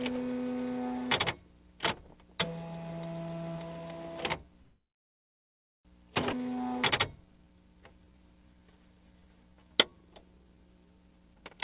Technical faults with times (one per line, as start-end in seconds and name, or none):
4.62-5.87 call audio freeze
6.33-6.35 skip ahead
6.37-6.74 jitter buffer slow-down
7.22-11.03 jitter buffer slow-down
11.07-11.62 jitter buffer speed-up